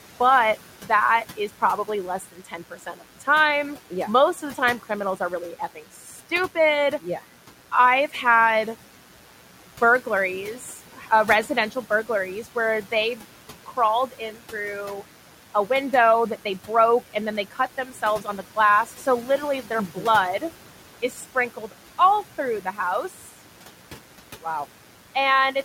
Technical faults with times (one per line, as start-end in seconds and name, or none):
0.00-25.65 mains buzz
0.00-25.65 noise suppressor artifacts
0.83-6.20 speech cut by the noise suppressor
10.05-14.53 speech cut by the noise suppressor
16.68-23.29 speech cut by the noise suppressor